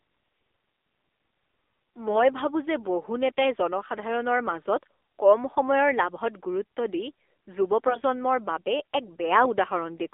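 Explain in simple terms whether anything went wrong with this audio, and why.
The speech went through the AMR narrowband mobile codec, which sends only a thin phone band, so the voice sounds muffled, buzzy and synthetic throughout. AMR bit errors from a weak link also hit the speech from 2.08 to 2.25 s, just before "ভাবোঁ যে বহু", and again from 7.88 to 8.00 s. Scrambled data briefly made the voice hoarse, scratchy and gargly while keeping its pitch and loudness.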